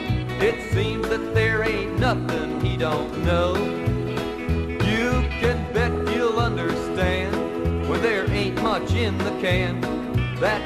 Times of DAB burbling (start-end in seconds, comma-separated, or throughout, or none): 0.39-0.64, 2.36-2.58, 4.08-4.25, 5.93-6.01, 8.64-8.81